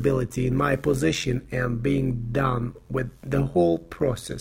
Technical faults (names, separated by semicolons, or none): overlap-add ripple